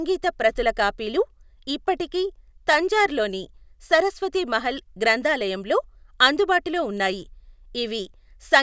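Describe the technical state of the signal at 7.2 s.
At 7.2 s the speech signal is intact, with no audible dropout, clipping, distortion or other fault at that point.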